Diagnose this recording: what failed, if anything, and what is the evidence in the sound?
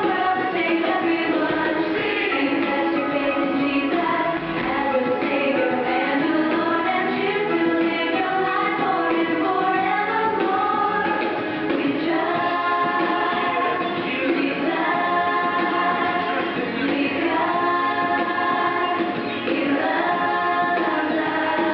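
Nothing failed in this recording, and the sound gives no evidence of any fault at any stage.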